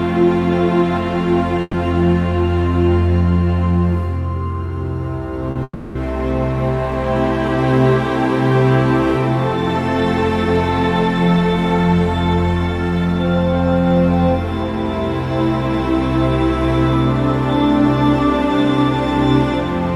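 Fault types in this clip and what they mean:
Burst of packet loss: Around 1.61 to 1.75 s, about 120 ms of audio failed to arrive. The receiver stretched the last sound into a fading buzz or hiss, with a brief silence of about 20 ms. The sound then resumes further on, with the section between missing.
Short concealed packet loss: At about 5.51 to 5.57 s, roughly 40 ms never reached the decoder in time. The receiver patched the hole by extending the preceding sound, then blended back. It comes across as a quick smear or wobble.
Long network dropout: From about 5.63 to 5.97 s, about 320 ms of sound is lost. What we hear is the last sound stretched and fading, then about 40 ms of silence, before the audio picks up further on. The likely cause is a long break in the network stream.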